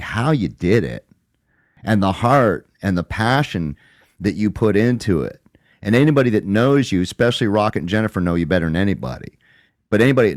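At 1.77 s (just before "and the heart and"), 7.71 s (just after "that knows you especially") and 9.69 s, the speech skips abruptly: audio missing between chunks, likely from 2-second chunk handovers dropping about 20 ms. Each shows as a hard waveform discontinuity and a thin vertical spectrogram seam.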